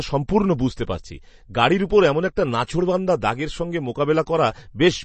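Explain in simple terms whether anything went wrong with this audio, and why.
The speech sounds watery and dull throughout, with nothing above about 8.3 kHz, likely from heavy MP3 compression discarding treble and faint detail to save space.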